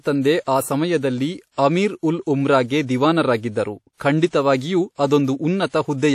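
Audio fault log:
Throughout: WMA compression, likely an early WMA 1 encoder at a low bitrate that fits about 48 kbps. The speech has a ringing, washy quality, with a hiss that swells and fades along with the voice, because quantisation noise from long transform blocks smears across tens of milliseconds around each sound. Weak spectral detail is discarded outright, and nothing is present above 15.7 kHz. The resulting coding damage is plainly audible.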